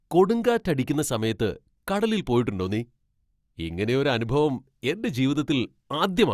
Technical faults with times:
none

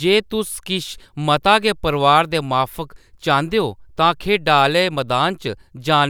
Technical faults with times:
none

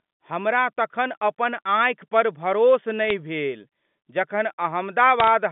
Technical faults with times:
3.04-3.11 bit errors on a digital phone line
5.20-5.28 bit errors on a digital phone line

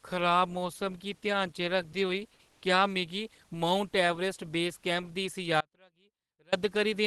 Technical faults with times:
1.92 sound dropped by the voice detector
2.50-2.62 comfort noise in place of the background
5.61-6.52 audio dropout to a faint residue

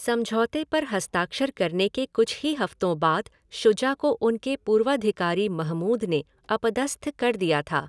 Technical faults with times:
none

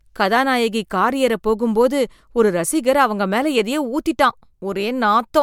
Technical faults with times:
none

